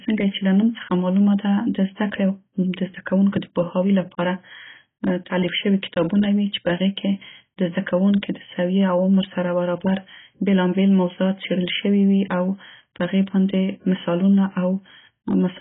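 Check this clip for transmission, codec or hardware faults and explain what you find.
One fault runs through the whole clip: AAC compression, heavy codec damage from a low-bitrate encode. The speech was most likely squeezed through an AAC-LC encoder at a rate that fits roughly 16 kbps. Short of bits, the encoder drops everything above about 3.8 kHz and quantises the remaining bands coarsely against its hearing model, leaving gaps in the spectrum. The result is dull, band-limited speech with smeared consonants and a warbling, fizzy texture on sibilants and held vowels.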